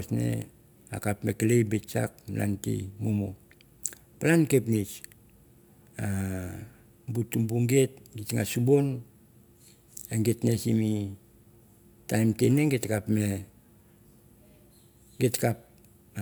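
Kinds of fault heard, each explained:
No technical faults can be heard anywhere in this speech recording. There is nothing to list for it here.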